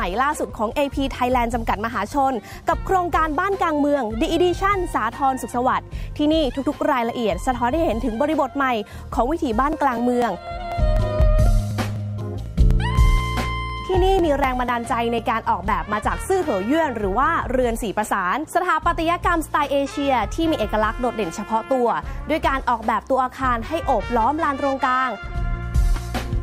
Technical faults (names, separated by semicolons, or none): periodic USB or driver dropouts